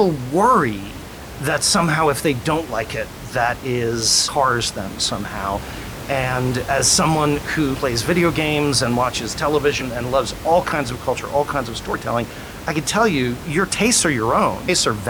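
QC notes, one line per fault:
4.27, 7.73–7.75, 9.80, 11.94 and 14.68 s: damaged data in a compressed stream. Each one is a quick chirp or blip lasting under a couple hundredths of a second, such as the one right after "somehow and as someone" and another just after "video games and watches". Bad bytes in the compressed frames throw the decoder off, so it loses sync and hunts for the next frame header. The room noise, about 13 dB under the speech, carries on underneath.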